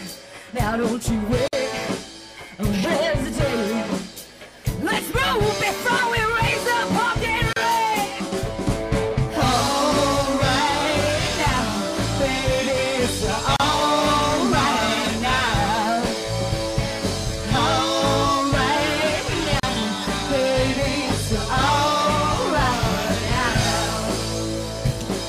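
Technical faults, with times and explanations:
1.48–1.53 s, 7.53–7.56 s, 13.56–13.60 s and 19.60–19.63 s: gap at a join of encoded pieces. Continuous sound drops into short silences, repeating every 6 s. The first lasts about 51 ms, the rest about 34 ms. The audio was encoded in separate pieces and joined without trimming. Each join keeps encoder start delay and last-frame padding. The edges are smeared by the codec. The sound then resumes where it stopped.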